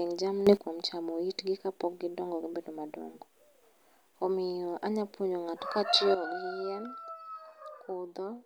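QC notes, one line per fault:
0.47–0.57 s: sudden gain jump. Speech and background noise leap up together by about 12 dB, then drop back, likely from a gain change applied without a ramp.
6.15 s to end: sudden gain jump. Speech and noise fall together by about 10 dB in one step and stay low, likely from an unramped gain setting applied between samples.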